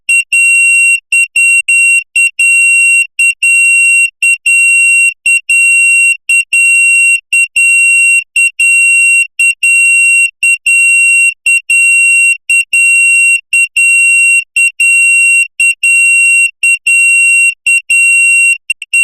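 A digital broadcast dropout mutes the sound at 1.60 s and again at 18.71 s: the receiver stopped getting valid frames, faded out in about 8 ms, and stayed silent for 72 ms and then 96 ms, consistent with three and four lost frames, before the programme resumes.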